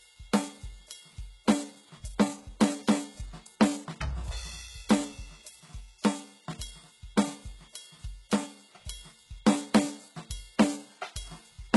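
Throughout the music, treble sounds synthetic and metallic, stopping near 11.5 kHz; unlike a plain low-pass, it stays bright but gritty, fitting heavy HE-AAC compression, likely near 12 kbps.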